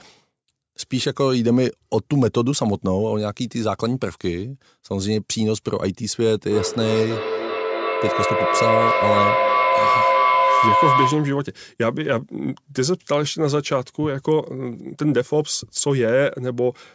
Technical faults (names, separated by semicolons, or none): feedback howl